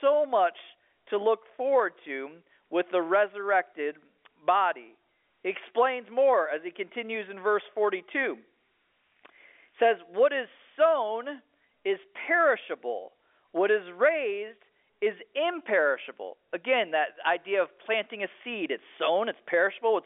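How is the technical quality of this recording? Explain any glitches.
No glitches turn up anywhere here, just the usual narrow band of G.711 A-law telephone coding at 64 kbps, with the sound sitting between 300 Hz and 3.5 kHz and nothing above 3.7 kHz.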